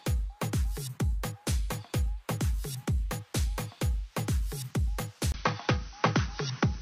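At 5.32 s the audio drops out for about 20 ms, then continues to the end with nothing above 6.1 kHz, a duller tone, a faint new noise floor and no real level change. This likely reflects the input switching to a poorer device.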